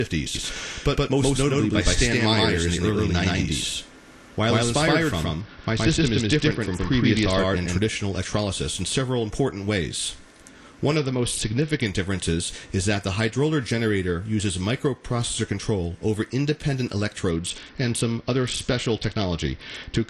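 From 0.35 s to 7.79 s every sound has a hard-edged echo about a tenth of a second behind it, at roughly the same level and with no decay or room colour, starting and stopping abruptly. This is a doubled audio track, likely a second copy of the same full-band audio captured by a slower path.

From 5.41 s to 7.39 s, from 10.96 s to 11.86 s, and from 17.31 s to the end of the clip, the treble turns dull and a gritty noise rises. This is a Bluetooth SBC bit pool drop, and the sound fits the bit pool falling from 31 to 8, near 66 kbps. With so few bits, the top sub-bands get almost nothing and the rest are coarsely quantised.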